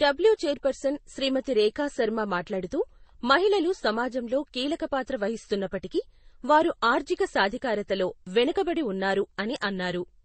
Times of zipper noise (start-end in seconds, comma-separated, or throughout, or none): none